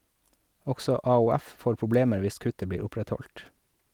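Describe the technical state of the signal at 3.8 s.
At 3.8 s the speech signal is intact, with no audible technical fault at that point.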